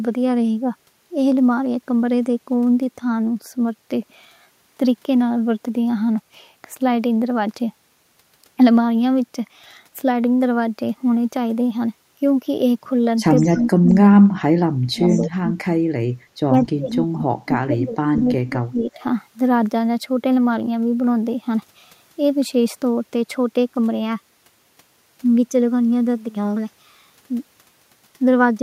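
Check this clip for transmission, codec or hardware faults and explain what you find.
There's an echo-canceller problem between about 13 and 19 seconds, showing up three ways.

Echo leak, 13.36–13.68 s and 15.1–15.21 s: a faint copy of the speech trails by 196 ms, about 20–25 dB down, likely far-end loudspeaker sound the canceller didn't fully remove.

Speech suppressed in double talk, 13.47–13.97 s, 14.16–15.55 s and 16.48–19.02 s: the speech sinks by roughly 30 to 40 dB in patches, likely because the canceller mistook overlapping talk for echo.

Background gated by the echo canceller, 15.83–15.94 s: the room sound ducks about 20 dB for a brief moment while the canceller clamps the mic, then returns.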